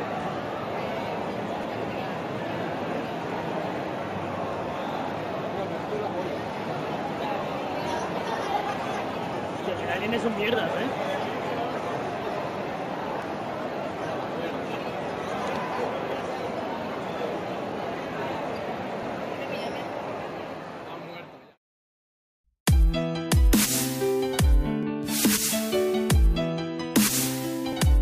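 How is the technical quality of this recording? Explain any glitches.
There's a recurring glitch: a click roughly every 2.9 seconds, about ten in all, from 1.63 to 27.73 s. These are likely clock drift buffer slips, where two devices disagree by a few hundred parts per million, so every so often a few dozen samples get dropped or repeated.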